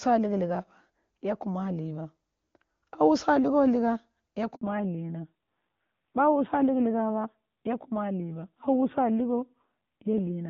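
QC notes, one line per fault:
4.55–4.61 s, handover gap: the speech cuts out for about 60 ms as the call is passed between networks. No speech frames arrive during the switch, so the decoder has nothing to play; the sound fades within a few tens of milliseconds and stays silent until the new link delivers audio. On the waveform this is a short flat stretch splitting the envelope. On a spectrogram it is a clean vertical blank band across all frequencies.
4.61 s to the end, fallback to narrowband: after the handover the call leaves HD Voice, whose wideband AMR-WB coding at around 23.85 kbit/s sounds clean before the gap, and continues on a narrowband codec. Everything above 4 kHz disappears, so the speech turns duller, muffled and somewhat rougher. The roughness fits a low narrowband rate near 7.4 kbit/s. A spectrogram shows a hard horizontal ceiling at 4 kHz from this point, with energy up to 7 kHz before it.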